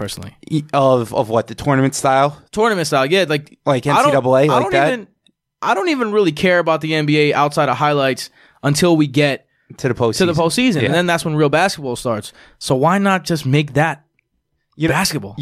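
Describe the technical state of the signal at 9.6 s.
At 9.6 s the speech signal is intact, with no audible dropout, distortion, glitch or other fault at that moment.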